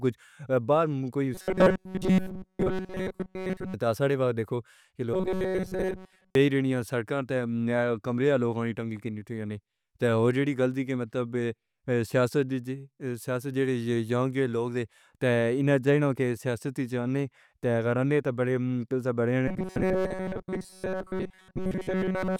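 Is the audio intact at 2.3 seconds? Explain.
No. From 1.35 to 3.74 s the audio carries robotic sound from repeated short buffers. New audio was likely arriving too seldom, so playback kept repeating a slice of about 5.3 ms while most of the real signal was skipped. That loop imposes a fixed 188 Hz buzz, turning the speech into a rigid, metallic drone that only loosely tracks the talking, until normal sound returns at "تاں ہمارے".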